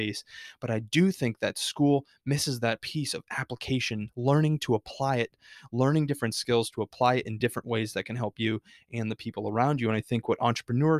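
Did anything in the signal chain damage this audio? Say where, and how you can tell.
Yes. Clock slip clicks run through the speech from 0.11 s to 10.99 s. They come about every 40 ms, hundreds of faint ticks that build into a soft rattle on loud or sustained sounds and vanish in pauses. The stage is likely the converter clocking: two unsynchronised clocks differing by something like 500 ppm, so one sample drops or repeats at each slip. A spectrogram shows evenly spaced thin vertical lines, and the waveform shows tiny single-sample steps.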